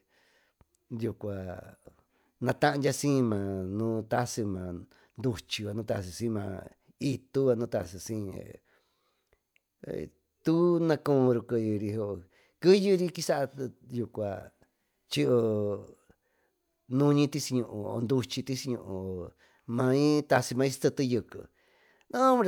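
Listening to the speech recording, nothing technical stood out at any point.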